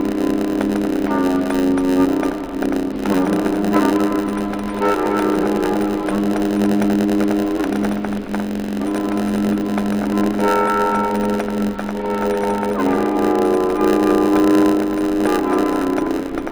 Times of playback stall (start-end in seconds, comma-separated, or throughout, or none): none